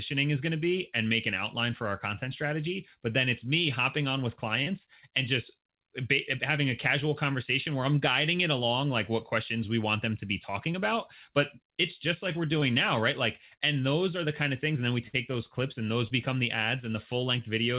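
Short concealed packet loss occurs five times: at 3.12 s between "our content strategy but" and "it's me hopping on", at 4.64 s, at 10.72 s after "want them to be", at 12.60 s between "it's just like we're" and "now right", and at 16.08 s. Each time about 20 ms of audio failed to arrive, and the receiver stretched the preceding sound across the gap before blending back in. The result is a brief smear or wobble rather than a hard click or a drop to silence. In the narrowband call audio, cut off above 4 kHz in a way that points to G.711 mu-law, these smears come across as small wobbles.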